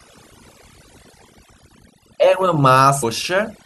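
Across the whole clip, overdone noise removal is at work: the noise reduction was set too strongly, so it cuts any frequency band that resembles its noise estimate, taking quieter parts of the speech with it. The background drops and breaks up into twinkling specks.

At 3.02 s, compressed frames are skipped. The decoder never plays a run of frames, so the audio jumps ahead roughly 300 ms; the run is about fifteen frames, each 26.1 ms long.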